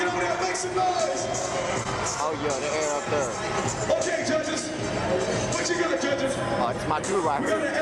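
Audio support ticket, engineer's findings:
Short concealed packet loss, 1.83–1.87 s: 20 ms missing, decoder extended prior sound as pitch or shaped noise, blended back. Spectrogram: smeared, stretched patch.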